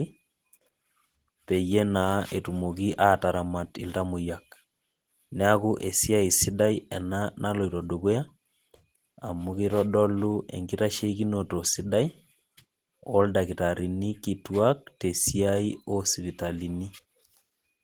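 Throughout, the speech carries plainly audible Opus compression, likely hybrid mode near 16 kbps. It sounds hoarse and muffled rather than MP3-like swirling, with sound reaching 20.2 kHz.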